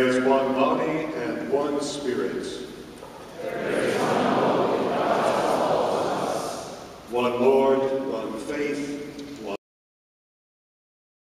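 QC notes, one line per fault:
9.56 s, cut-off end: the sound stops abruptly partway through, then about 1.7 s of digital silence runs to the end of the clip. The final buffers were never written or played, so the waveform ends mid-event instead of finishing. Unlike a fade-out or a natural ending, there is no decay, no tail and no reverberant trail. The level drops straight from active sound to silence.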